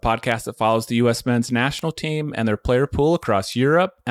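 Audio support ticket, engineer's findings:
Bit error spikes: three isolated sharp ticks, broadband and unrelated to the audio, at 0.32 s (just before "that follows the", about -15 dBFS), 1.79 s (before "team and their player", about -9 dBFS), and 3.23 s (after "team and their player", about -21 dBFS). Each fits a single flipped bit in memory or on a digital link, throwing one to three samples off by a power of two before they snap back.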